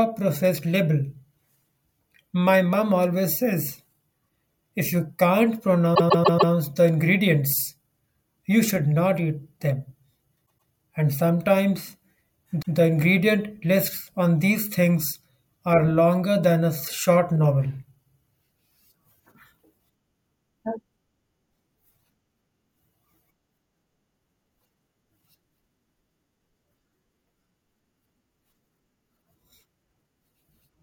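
It's a speech clip with repeated frames in three spots. At 5.94 to 6.52 s a 144 ms chunk plays four extra times, a real stutter. At 10.45 to 10.69 s a 120 ms chunk comes back twice more, and at 12.61 to 12.76 s a 144 ms chunk repeats once. The blocks are short enough to fit a run of compressed frames being written or sent more than once, so the decoder plays the same bit again and stretches the audio.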